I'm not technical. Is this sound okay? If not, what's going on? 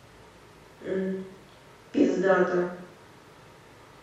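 Yes, nothing wrong can be heard in this speech recording; there are no dropouts, clicks, distortion or glitches anywhere in it.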